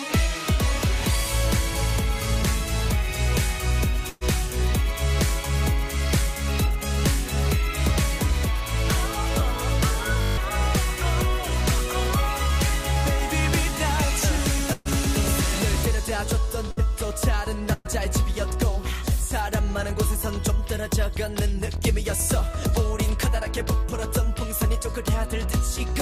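Four bursts of packet loss run through this audio, at 4.09, 14.73, 16.71 and 17.73 s. Each time a run of packets failed to arrive, and the receiver covered the hole by stretching the last bit of sound and fading it down. That's why you hear a held, dying tail of roughly 115 to 125 ms at three of them and about 57 ms at 16.71 s. When playback picks up again, about 120 ms of audio has been skipped at the longer three and about 60 ms at 16.71 s. There's also a system hang loop from 10.21 to 10.37 s. The machine or its driver stalled while the audio hardware kept replaying the same 20 ms slice of its ring buffer, eight times over. Because the slice is so short, it comes out as a steady 50 Hz buzz rather than a stutter, and around 150 ms of the real audio is lost under it.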